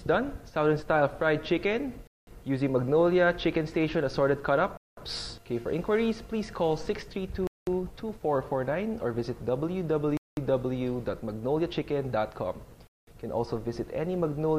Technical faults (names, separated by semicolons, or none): gap between chunks